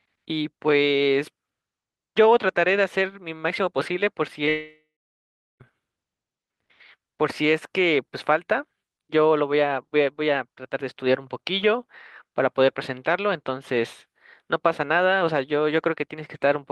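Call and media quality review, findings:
Short concealed packet loss, 4.45 to 4.49 s: about 20 ms of speech missing at the receiver, jitter-buffer concealment extends the preceding sound then crossfades back. Audible as a brief smear just before the gap.

Long network dropout, likely cause, 4.49 to 5.62 s: about 1.1 s of audio never arrives. Concealment continues the last sound as a fading buzz or hiss, then about 0.7 s of near-silence; speech resumes with that stretch lost.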